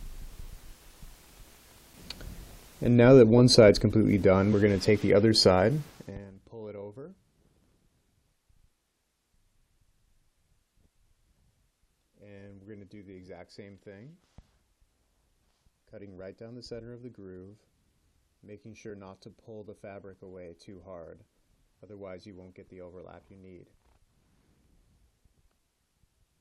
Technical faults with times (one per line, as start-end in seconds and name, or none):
4.52 damaged data in a compressed stream
18.89 damaged data in a compressed stream